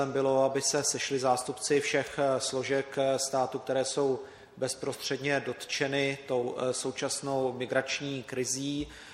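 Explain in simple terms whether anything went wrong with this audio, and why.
Nothing went wrong here.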